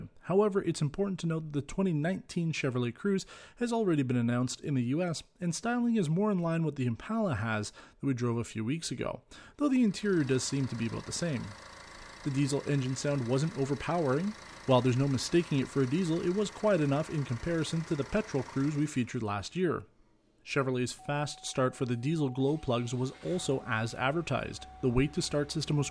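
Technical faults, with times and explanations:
Nothing here stands out as a technical fault; it all comes across as it should.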